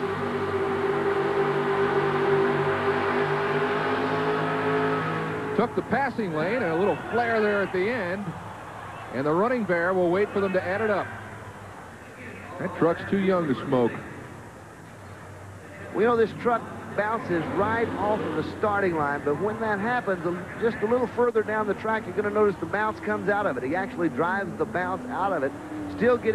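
No technical faults can be heard anywhere in the audio, and the signal holds steady throughout.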